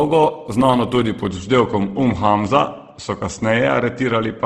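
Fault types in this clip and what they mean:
Opus compression: The encoder likely had too few bits, which fits a rate near 16 kbps. In its music-style transform mode it kept each band's overall energy but filled starved bands with folded copies of lower bands or with noise. In this speech the damage is plainly audible: the sound turns rough and grainy rather than swirly, and nothing reaches above 12.1 kHz, which points to a wideband setting.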